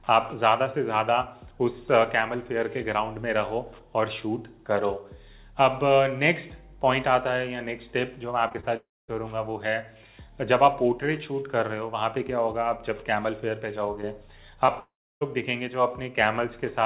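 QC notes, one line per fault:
8.48–8.65 s, short concealed packet loss: three brief gaps beginning at 8.48, 8.53 and 8.60 s, each about 20 ms of missing audio. The receiver patched them by extending the preceding sound for roughly 16 to 26 ms before blending back, so this stretch has a quick smeared, wobbling texture rather than clean detail. Within the narrowband call audio, which has nothing above 4 kHz and fits 64 kbps G.711 A-law, the patches sit close together.
8.77–9.10 s, long network dropout: about 0.32 s of audio never plays. The last sound is briefly carried on as a fading buzz or hiss, then roughly 0.22 s of silence follows before the signal returns further along with that portion simply gone. The most likely cause is an interruption in packet delivery long enough to exhaust concealment.
14.66–14.70 s, short concealed packet loss: a single 20 ms hole, filled by about 17 ms of continued sound, heard as a brief smear just before the next dropout.
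14.80–15.23 s, long network dropout: about 0.42 s is lost. A fading continuation of the prior sound is followed by roughly 0.32 s of silence, and playback then resumes past the missing audio.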